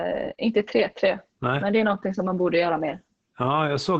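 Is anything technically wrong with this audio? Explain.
Yes. Throughout, the speech sounds muffled, hoarse and faintly robotic, with nothing above about 8.6 kHz. This is heavy Opus voice compression. The SILK linear-prediction coder, held to wideband, codes the excitation very coarsely, which fits a bitrate near 10 kbps.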